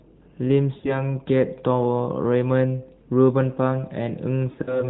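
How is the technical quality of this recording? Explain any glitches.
The recording has two dropouts of lost AMR speech frames, heard through a narrowband phone channel with nothing above 4 kHz and a light synthetic edge.

Lost AMR speech frames occur at 0.78 to 1.03 s and 4.52 to 4.86 s. Radio errors corrupted frames, and the decoder replaced them by repeating the last good pitch and vocal tract settings at falling gain. The first event loses 60 ms, so the sound smears, warbles and sags before recovering roughness. The second loses 100 ms scattered over 160 ms, with a longest run of 60 ms, giving repeated stuttering dips near the end.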